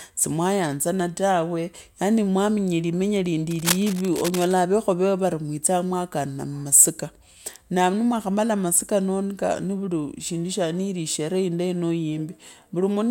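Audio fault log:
3.51–4.54 s, cable scratch noise: for about a second a dense, ragged scratching and rustling runs over the speech, sitting only a little below the speech itself, so it is hard to miss. The bursts are uneven in strength and spacing rather than a steady hiss. The likely cause is a worn cable, connector or control being moved, its contact resistance jumping rapidly and spraying these irregular noise bursts into the signal until it settles.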